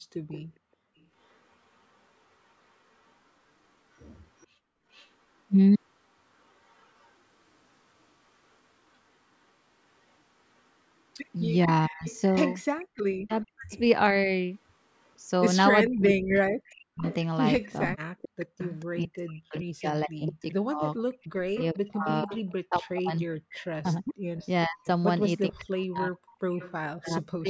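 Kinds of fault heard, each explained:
Echo leak: The far end was likely playing the call over a loudspeaker, and its echo canceller left part of that sound in its microphone signal and sent it back. The result is a faint copy of the speech trailing 443 ms behind, at 0.28–1.39 s, 3.08–7.12 s, 12.08–13.79 s and 15.86–26.73 s. It sits roughly 20 dB below the speech, fades to about 35 dB down in the second stretch, and rises to about 15 dB down in the last.
Speech suppressed in double talk: With both sides speaking at once, the echo canceller likely could not tell the near talker from the returning loudspeaker sound and pulled the whole signal down. The speech sinks sharply, by as much as about 40 dB, in broken pieces. It totals around half a second between 11.87 and 14.29 s, and around five seconds from 15.87 s to the end of the clip.
Background gated by the echo canceller: While the loudspeaker signal was active, the echo canceller clamped the microphone hard to keep echo out. 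It took the room sound with it. At 21.11–21.25 s the background drops by up to about 32 dB for roughly 150 ms. The effect is a brief hole in the ambience that closes again once the canceller releases.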